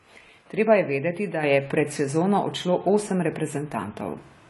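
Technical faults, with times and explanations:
Throughout: AAC compression. Likely low-bitrate AAC-LC coding, fitting roughly 32 kbps, removed everything above 11.5 kHz, leaving the speech plainly dull, smeared and fizzy.
1.43 s to the end: sudden gain jump. Right after "je vedeti da", a gain step without a ramp raises speech and background together by about 6 dB.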